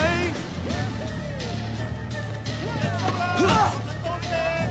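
No technical faults can be heard: the audio carries the normal marks of a call's microphone processing and codec path, with nothing above about 8 kHz, which fits a wideband Opus stream at around 64 kbps.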